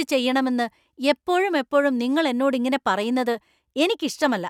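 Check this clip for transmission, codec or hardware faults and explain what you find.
Nothing wrong can be heard anywhere in this speech recording.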